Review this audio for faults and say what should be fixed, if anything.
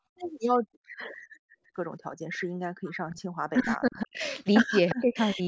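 Echo leak: faint delayed copies of the speech appear at 0.99–1.07 s, about 30 dB below the talker, and 4.89–4.95 s, stronger at about 10 dB below. Both trail the original by 354 ms, likely loudspeaker sound that the far end's echo canceller failed to remove and sent back. Fix: improve echo canceller convergence and delay tracking on the loudspeaker side, or use a headset there.

Speech suppressed in double talk: the speech dips sharply at 2.79–3.18 s, 3.51–4.21 s and 4.64–4.76 s, by up to about 40 dB, and again at 4.95–5.41 s by about 20 dB. The likely cause is the echo canceller treating overlapping talk as echo and attenuating it. Fix: tune double-talk detection so near-end speech is not suppressed while the other side speaks.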